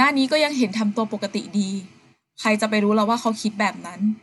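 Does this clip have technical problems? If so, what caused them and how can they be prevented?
No, nothing in this one sounds wrong to me, so there's nothing to track down or guard against here.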